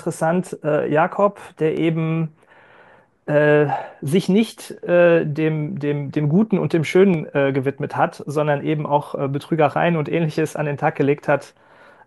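At 1.77 s and again at 7.14 s the speech carries a single sharp click, most likely dropped samples: well under a millisecond of the stream goes missing, so the waveform jumps abruptly. Unlike a dropout, no sound is audibly lost, only that instant tick.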